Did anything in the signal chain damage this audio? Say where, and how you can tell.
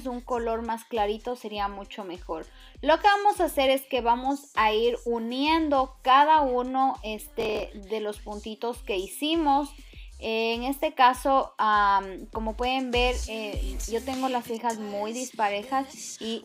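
Yes: processor overload crackle at the driver/buffer stage, 7.18 to 7.77 s. Dozens of sub-millisecond buffers missed their deadlines and were skipped, leaving hard-edged gaps heard as gritty tearing.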